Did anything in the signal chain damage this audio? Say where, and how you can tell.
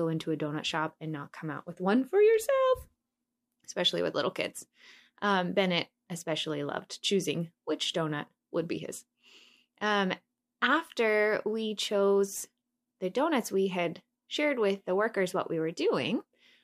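No, nothing in the signal chain damaged this speech. Listening closely, no stage from capture to playback leaves an audible mark on the recording.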